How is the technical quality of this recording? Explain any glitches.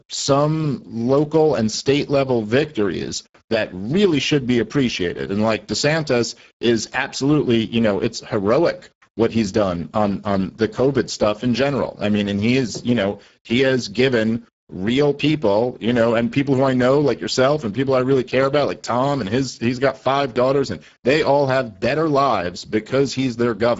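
The recording carries plainly audible codec damage from start to finish. Speex codec: across the whole clip the speech sounds hoarse and noisy, the CELP coder having too few bits for its excitation, which fits a low setting near 10 kbps. Nothing is present above 7.7 kHz, and the upper band sounds like a shaped noise fill rather than real detail.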